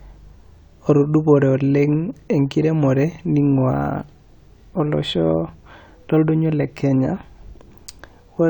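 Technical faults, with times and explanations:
No technical faults are present, so there are no times or explanations to give.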